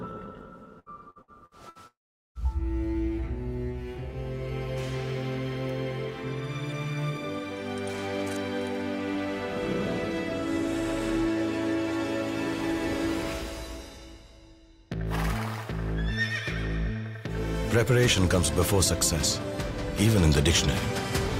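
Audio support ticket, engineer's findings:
Choppy, robotic audio from 0.79 to 1.78 s, with short holes up to 68 ms and about 30% of that stretch patched over. Repeated packet loss (robotic sound): the jitter buffer or loss concealment keeps extending the last sound to cover each missing packet.

Brief fading tail at 1.87 s, then near-silence until 2.38 s. Audio resumes with roughly half a second absent. Long network dropout, likely a stall in the network path: concealment stretches the last sound, fades out, and the gap stays empty.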